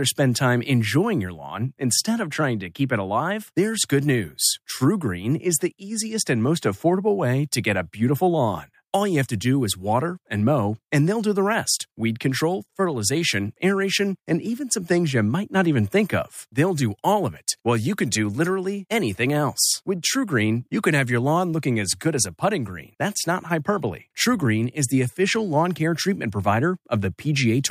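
No technical faults occur at any point in the recording, so there is nothing to describe in time order.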